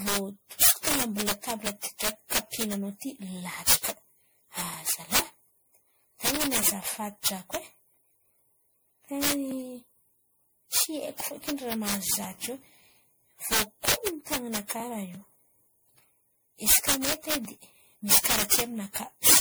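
From start to finish the loudest moments of the speech break into violent cracks, far harsher than ordinary clipping. This is integer overflow: the signal was pushed about 7 dB past full scale, and instead of being held at the limit, each peak wrapped around to the opposite sign and flipped across the full range. Only a small fraction of samples, under one percent, cross the limit, so the damage lands in sharp bursts on the peaks.

Running through the whole clip is a swirly, hollow smearing, with consonant attacks blurred and a watery, holed-out quality to the spectrum, more degraded than a single pass at a moderate MP3 rate would leave. The cause is likely generation loss: the audio points to repeated MP3 encoding at around 96 kbit/s, roughly ten times over. Each re-encode quantised the sound again on a shifted frame grid, so the noise and spectral gaps accumulated.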